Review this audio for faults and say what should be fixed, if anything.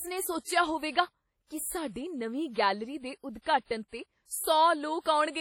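Throughout, the speech rings and smears, with hiss pumping along and nothing above 17.8 kHz, likely heavy WMA compression at a low bitrate around 32 kbps. To prevent it, export from the original source to a lossless format or a much higher bitrate.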